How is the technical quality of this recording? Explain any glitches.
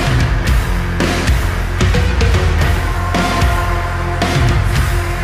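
No technical glitches turn up anywhere in the recording, so the signal holds steady throughout without any interruption or disturbance to explain.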